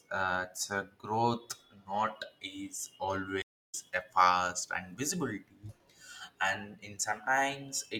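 A speech clip with a stream reconnect at 3.42 to 3.75 s. After "not is", the audio stops dead for about 286 ms, then resumes at "a fast and" with roughly a fifth of a second of material skipped. The connection dropped and the player restarted decoding at a later point in the stream. Unlike a plain dropout or buffer underrun, where the talk picks up where it stopped, here the content jumps ahead after the gap.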